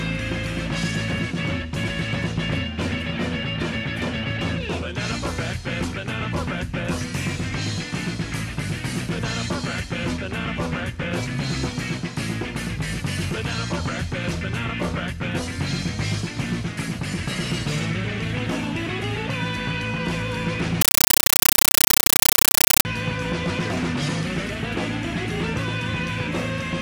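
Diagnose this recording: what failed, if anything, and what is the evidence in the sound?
From 20.81 to 22.85 s, a compressed stream played as audio at the playback link produces chattering static. Undecoded AC-3 frames reach the converter as samples, making 9.3 ms noise bursts at 31.25 Hz. The waveform shows dense noise blocks between near-silent gaps, and the spectrogram shows broadband vertical stripes.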